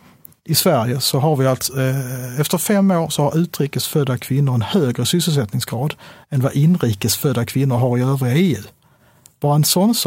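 Nothing stood out as a technical fault on listening to this recording of speech.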